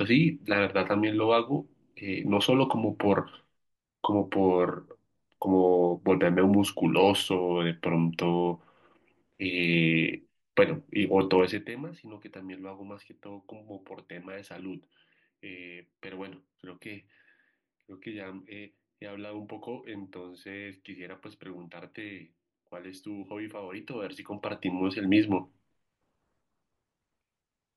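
The gain control jumps in 1 dB steps with no smoothing, so each jump puts a small click into the speech, which is zipper noise. From 11.38 to 11.74 s the level drops about 20 dB at roughly fifty steps a second, giving a fast, buzzy zip. From 23.64 to 25.18 s it climbs about 20 dB at around ten steps a second, so the clicks come as a slower, countable ticking.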